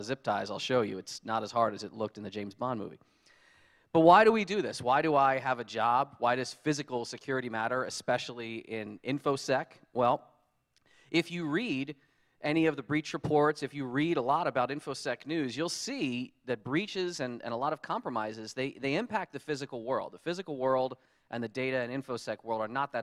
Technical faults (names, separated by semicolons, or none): none